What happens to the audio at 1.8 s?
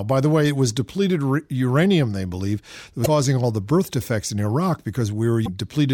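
Nothing goes wrong at 1.8 s; the speech runs through that moment intact, with no dropout, click or distortion.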